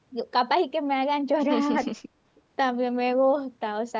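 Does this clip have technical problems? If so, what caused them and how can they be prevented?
Yes. Between 1.84 and 1.93 s the speech dips by about 10 dB for roughly 70 ms in total, most likely speech suppressed in double talk: the echo canceller, unable to separate the local talker from loudspeaker echo while both spoke, attenuated everything. The waveform shows a brief notch in the envelope, and the spectrogram shows a faint band across all frequencies. A better-tuned canceller with proper double-talk detection, or a headset, would prevent it.

From 2.35 to 2.41 s there is a faint delayed copy of earlier speech, likely an echo leak from a far end on loudspeaker, returning 319 ms late at roughly 35 dB below the speech. On a spectrogram it appears as a weak replica of earlier harmonic patterns, hard to see in the waveform. Using headphones at the far end, or improving its echo cancellation, would stop it.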